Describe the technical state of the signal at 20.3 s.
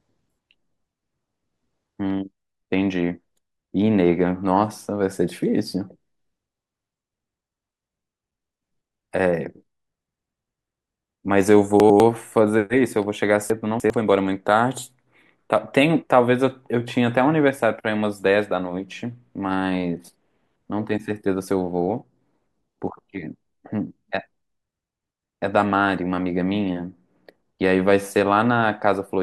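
At 20.3 s the speech signal is intact, with no fault audible at that moment.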